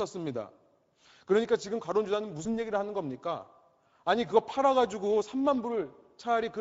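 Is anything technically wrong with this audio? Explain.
Yes. The whole clip passes through the Speex codec, at a setting whose damage is plainly audible and fits a bitrate around 16.8 kbps. This CELP speech coder has too few bits for the excitation signal, so the speech comes out noisy and hoarse.

From 2.43 to 2.56 s there is VoIP packet loss concealed by the speech codec. The gap points to a single lost 20 ms frame. The decoder extended its last pitch and filter while lowering the gain, so the speech smears into a buzzy tone or coloured noise that fades. It stays weak or distorted for tens of milliseconds or more afterwards because each decoded frame builds on the previous one.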